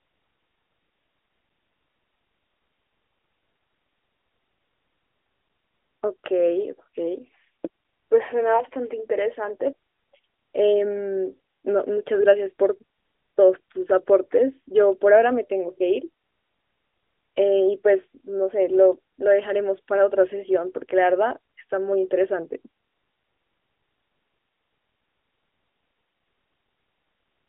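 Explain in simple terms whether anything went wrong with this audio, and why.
Nothing stood out on listening; the speech sounds like an ordinary phone-quality recording, with no dropouts, glitches or other problems to point to.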